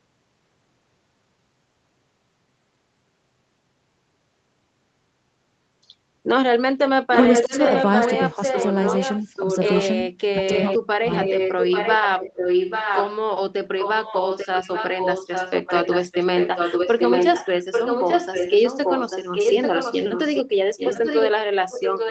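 From 7.14 s to 9.77 s, a delayed copy of the speech comes back about 0.84 s after the original, only about 5 dB quieter. This is an echo leak, likely from a far-end loudspeaker whose echo canceller let its microphone pick-up through. Unlike room reverberation, it is a distinct repeat, not a smeared tail.

During that overlap the live speech is pulled down, which is speech suppressed in double talk. The dips come at 7.43–7.53 s (roughly 20 dB), 8.35–8.56 s (a slight dip of a few dB) and 9.34 s (a brief dip of roughly 10 dB). The deepest is at 10.35–11.09 s, where the speech drops roughly 40 dB to near silence. These dips follow the moments when echo and talker collide, likely because the canceller turned both down. That sets them apart from packet-loss gaps, which strike regardless of overlap and usually cut out abruptly.

The echo returns at the same 0.84 s delay and similar level from 10.5 s to 13.14 s, then again from 13.79 s to the end.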